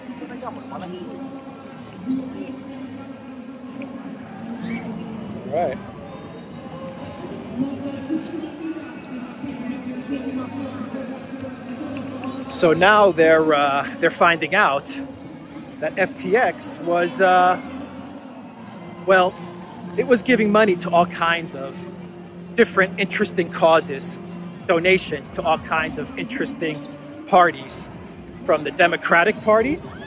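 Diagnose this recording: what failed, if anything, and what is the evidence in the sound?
Nothing failed, and there is no evidence in the sound of any fault.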